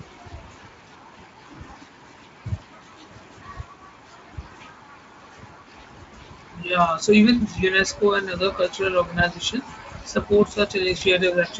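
At 10.97 to 11.03 s, VoIP packet loss concealed by the speech codec covers a gap of about 40 ms, which fits two lost 20 ms frames. The Speex decoder stretches its last pitch and filter into a brief buzzy tone or coloured noise that fades, showing as smeared, decaying energy on a spectrogram and a shrinking waveform envelope.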